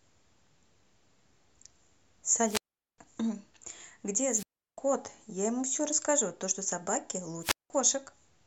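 Speech that briefly swells into hiss and then falls into near-silent holes at 2.44–2.98 s, 4.29–4.78 s and 7.41–7.70 s, with mutes of 410, 348 and 187 ms. These are wireless microphone squelch dropouts, where the fading radio signal trips the receiver's squelch.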